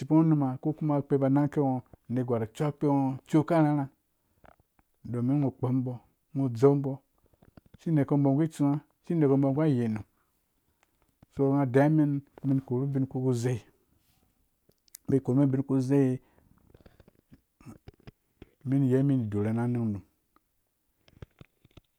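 No technical faults are audible anywhere in this recording.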